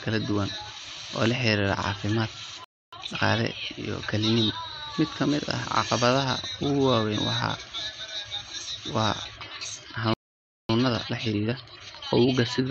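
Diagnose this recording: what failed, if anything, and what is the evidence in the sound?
Playback stall at 2.64–2.93 s and 10.14–10.69 s: the speech drops to silence for 0.28 s and 0.56 s, likely a player buffer running dry.

Time-compressed catch-up at 2.93–3.21 s (2x) and 10.69–12.63 s (1.25x): the player cuts and cross-fades small slices, hurrying speech at normal pitch.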